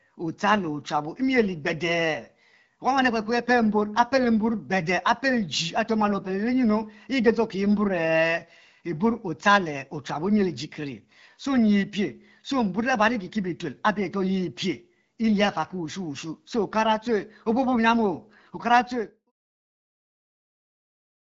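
No technical faults can be heard in this recording, so there is nothing to describe in time order.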